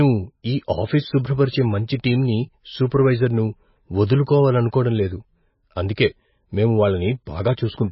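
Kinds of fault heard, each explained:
MP3 compression: The speech was likely squeezed through an MP3 encoder starved of bits, with heavy damage that fits a bitrate of roughly 18 kbps. With so little data, the encoder drops everything above 5.6 kHz and discards weaker frequency lines, which flicker on and off between frames. Throughout the clip this makes the speech dull and band-limited, with a watery, swirling texture, metallic chirping on sibilants, and blurred consonant onsets.
pre-echo: The transform codec spreads its quantisation noise evenly across each block, so when a sharp onset lands late in a block, the noise meant to hide under the loud part leaks into the quiet moment just before it. Near the end of the clip, from 7.54 to 7.57 s, a hiss runs about 37 ms ahead of an attack, and the onset itself sounds softened and smeared rather than crisp.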